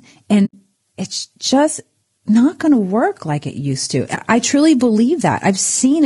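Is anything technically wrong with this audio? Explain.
Yes, two faults are audible. Throughout, the speech sounds rough and grainy, with noise between the harmonics, a texture that points to low-delay AAC compression, likely at around 32 kbps.

AAC frame loss with muting occurs at 0.45 to 0.54 s, just before "it's just not going", and at 4.15 to 4.19 s, between "like it used to" and "I truly". The decoder zeroed the missing frames, so the sound fades out and in, leaving a soft-edged hole of about 80 ms and a brief dip of about 20 ms.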